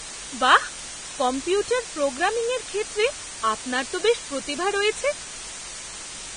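Speech throughout carries a steady, even hiss sitting only about 10 dB below the voice, the sign of low bit depth with dither, consistent with 5-bit quantisation; a spectrogram shows a flat noise floor up to the cut-off. The speech also sounds grainy and smeared, likely from heavy Vorbis compression at around 25 kbps, with nothing above 9.7 kHz: a hard horizontal ceiling and blotchy treble on the spectrogram.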